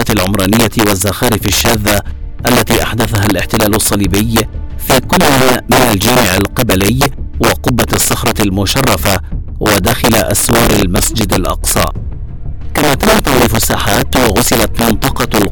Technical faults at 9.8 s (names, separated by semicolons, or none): integer overflow